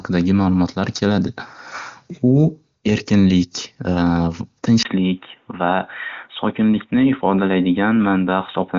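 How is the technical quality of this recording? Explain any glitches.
Quality drops partway through. From 4.83 s to the end, the input likely switched to a poorer device. After a 20 ms gap, nothing above 3.8 kHz remains, down from about 7.4 kHz through the AMR wideband codec before. The sound turns dull and boxy at an unchanged level, with faint new background noise.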